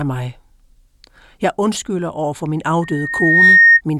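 Loudspeaker feedback squeal runs from 2.82 s to 3.81 s, a single tone at 1.8 kHz that rises out of the speech over about 0.7 s and ends up roughly 10 dB louder than it. The microphone was hearing the loudspeaker it was driving, and at that one frequency the loop gain went above one, so the tone fed itself louder on each pass until it swelled into a steady whistle.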